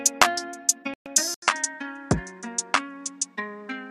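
At 0.94 s there's a digital broadcast dropout. The sound mutes and stays gone until 1.06 s, so about 120 ms of programme is simply lost. The receiver stopped trusting what it was getting, either because the signal went or because frames failed their checks, and it held silence until clean frames came back. That length fits roughly five lost frames.

At 1.34 s the character of the sound changes, and it stays that way to the end. This is most likely an input switched to a poorer device. There's a brief hole of about 80 ms at the changeover. After it, nothing comes through above 10.3 kHz, so the top end turns duller. The level also drops by around 10 dB, and a new noise floor appears, sitting roughly 35 dB below the sound.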